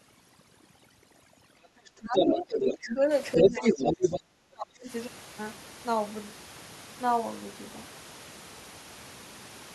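From 0 to 3.11 s, overdone noise removal is pulling individual frequency bands down wherever they come close to the noise estimate, so the background drops and breaks up into twinkling specks, and quieter components of the speech are stripped away with it.

Between 1.62 and 2.94 s, other side's voice leaking through appears, likely because the echo canceller left part of the loudspeaker signal in the microphone; this second voice sits at about the same level as the speech. It returns from 3.33 to 4.2 s, now somewhat louder than the talker.

Speech suppressed in double talk overlaps both leaks. From 2.0 to 3.0 s the talker dips by around 10 dB. From 3.35 to 4.89 s the drop deepens to roughly 30 dB, almost cutting out, likely because the canceller could not separate talker from echo. The room noise sits about 17 dB below the speech.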